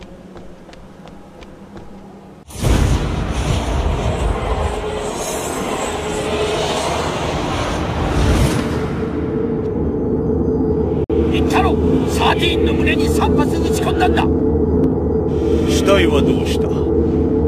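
Sharp single clicks at 1.00 s and 5.45 s are likely dropped samples: well under a millisecond of the stream goes missing, so the waveform jumps straight to a later value. Each click is a thin broadband line, with no audible gap.

From 11.04 to 11.10 s the sound cuts out for about 53 ms, then resumes further along as though it had kept playing. This is likely a Bluetooth dropout, with packets arriving too late and being discarded. A gap of that length fits roughly four lost packets.

The same brief clicks from dropped samples return at 12.80 s and 14.84 s. Each is again a single instantaneous jump in the waveform, far too short to remove any sound.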